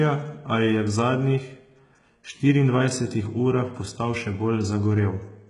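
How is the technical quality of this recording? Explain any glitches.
The recording has heavy, clip-wide codec damage, most likely from HE-AAC compression at a very low bitrate, consistent with roughly 12 kbps. From start to finish the upper band sounds synthetic rather than recorded. Only the lower spectrum is coded faithfully, and the treble is rebuilt by copying lower bands upward under a coarse envelope. The copied harmonics don't line up with the real ones, so sibilants turn gritty, metallic and lispy.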